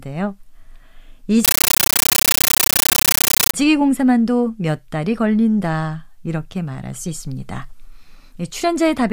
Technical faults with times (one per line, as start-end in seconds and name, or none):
1.45-3.54 compressed stream played as audio